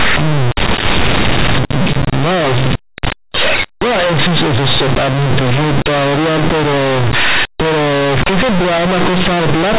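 From start to finish the speech comes through as very loud, harsh, buzzy distortion, with heavy noise filling the pauses. This is companded audio read as linear: mu-law telephone bytes are played as plain 8-bit samples without expansion, so quiet passages swing as widely as loud ones.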